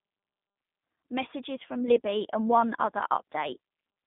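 From start to finish the speech carries G.729 codec damage, plainly audible. Nothing above 3.8 kHz survives, leaving a 150 Hz to 3.7 kHz telephone band. The codec rebuilds speech from a filter, pitch predictor and few pulses at 8 kbit/s. It sounds rough and synthetic.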